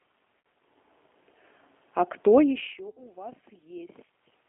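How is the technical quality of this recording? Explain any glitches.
Technical quality is limited by two faults: coding throughout and two short dropouts.

Throughout, the speech passes through a G.729 codec at 8 kbit/s, squeezed into roughly a 250 Hz to 3.4 kHz telephone band. The encoder rebuilds each 10 ms frame from a filter, pitch predictor and a few pulses, so the voice sounds plainly rough, thin and slightly synthetic.

At 0.41–0.45 s and 2.89–3.02 s there is VoIP packet loss concealed by the speech codec: 40 ms and 80 ms of audio missing, which fits two and four lost packets. The decoder extends the last pitch and filter with falling gain, giving a brief buzzy or noisy, fading smear that lingers after audio resumes.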